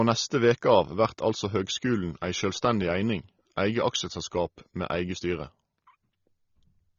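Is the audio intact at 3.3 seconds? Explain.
No, AAC compression damage runs through the whole clip, 3.3 s included. Coarse quantisation, likely from low-bitrate AAC-LC, leaves the speech dull, smeared and fizzy on sibilants.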